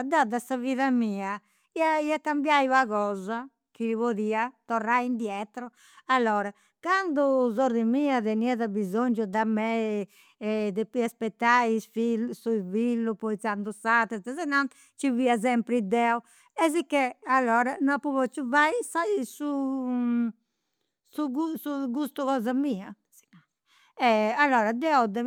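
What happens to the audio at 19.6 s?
Nothing goes wrong at 19.6 s; the speech continues intact through that moment with no audible fault.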